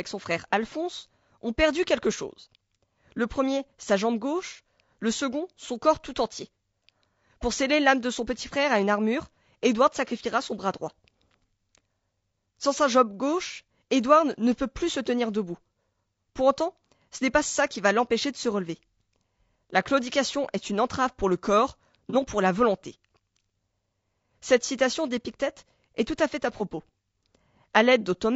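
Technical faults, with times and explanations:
Throughout: low-delay AAC compression. The speech sounds rough and grainy, with noise filling the gaps between harmonics and a thin, synthetic top end. This likely comes from AAC-ELD at 32 kbps. Its short frames resolve pitch harmonics poorly and leave too few bits for detail.
22.10 to 22.15 s, and 26.57 to 26.61 s: AAC frame loss with concealment. The first comes after "entrave pour le corps" and before "pour la volonté". The second follows "tout à fait à". Each is a brief smeared, noisy patch. The decoder patched each gap, which fits one lost frame of about 30 ms, from the last good spectrum.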